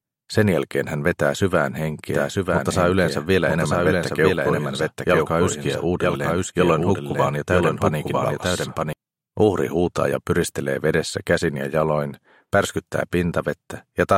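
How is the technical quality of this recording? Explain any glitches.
The recording has one fault, a doubled audio track, running from 2.13 s to 8.93 s. During that stretch a second full-band copy of the sound plays about a second behind the original and roughly 5 dB quieter, likely because the signal was picked up again through a slower path. The copy has no decay or room colouring, so it sounds like a flat, delayed replay rather than an echo, and it begins and ends abruptly.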